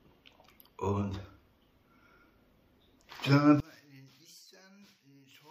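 From 3.6 s to the end, the sound drops by about 30 dB, likely from one channel inverted cancelling shared content in mono. The waveform collapses and the spectrogram empties out.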